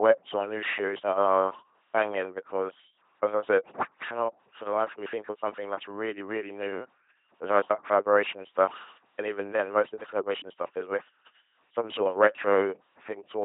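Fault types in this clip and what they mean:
LPC-10 vocoder: The whole speech clip sounds buzzy and robotic. Each moment is rebuilt from a pulse train or noise through a small vocal tract filter. The damage is heavy, nothing sounds above 3.8 kHz, and the result fits a 2.4 kbit/s codec.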